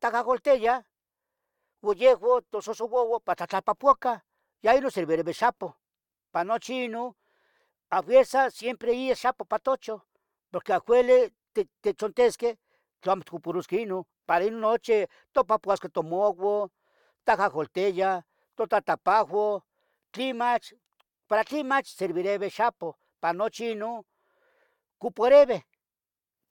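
Nothing technical goes wrong anywhere in this recording; there's simply no fault to point to.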